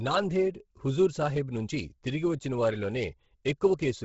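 Throughout the speech, heavy Bluetooth LC3 compression has likely stripped the upper spectrum, which fits a bitrate around 16 kbps in 10 ms frames. Nothing remains above 7.7 kHz, and what is left at the top turns grainy and breathy, with noise replacing lost detail.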